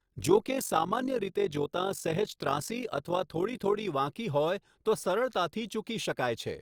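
From the start to 3.88 s the speech carries overlap-add ripple. The audio was split into windowed frames and rebuilt with an overlap whose windows fail to add up to a steady gain, so the level dips and swells once per frame, around 50 times a second, by about 11 dB. It sounds like a rough, buzzy robotic flutter. On a waveform the envelope shows a regular scalloped pattern; a spectrogram shows evenly spaced vertical banding across all frequencies.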